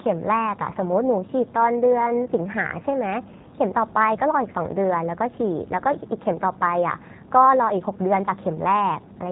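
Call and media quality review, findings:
G.729 codec damage, throughout: band-limited, nothing above 3.8 kHz, plainly rough, synthetic timbre. Sound points to G.729A at 8 kbit/s, a filter-plus-pulse model that rebuilds speech frame by frame, discarding fine waveform detail and all upper-band content.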